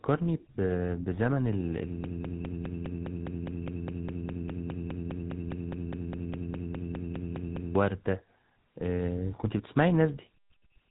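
From start to finish the speech has a buzzy, gravelly roughness, with nothing above 3.8 kHz. This is GSM full-rate codec damage: the voice is rebuilt from a vocal-tract model fed by sparse, regularly spaced pulses, consistent with the 13 kbps GSM full-rate coder.

From 2.04 s to 7.76 s a fragment about 0.2 s long repeats back to back, unchanged, in a broken-record loop, and the speech that belonged in those seconds never arrives. The player or stream likely stalled and kept resending the last piece it held.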